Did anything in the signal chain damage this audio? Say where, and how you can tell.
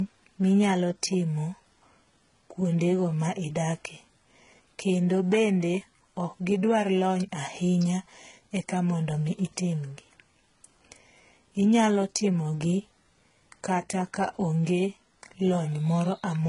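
Yes. Transcoding between lossy codecs runs throughout the speech, at the codec stage. Nothing remains above 11 kHz, and two distinct sets of coding artefacts are heard together. That fits a likely chain of very low-rate HE-AAC re-encoded as MP3 near 48 kbit/s, with the second coder preserving the first coder's damage and adding its own.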